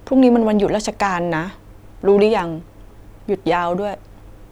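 No technical faults are audible.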